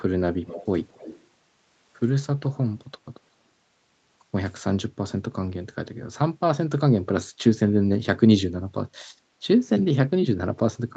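From 0.46 to 0.66 s and again from 0.9 to 1.24 s, a faint copy of the speech returns about 214 ms late, first about 15 dB below the speech, then about 20 dB below. This echo leak likely comes from a loudspeaker-side echo canceller that failed to remove all of the picked-up audio.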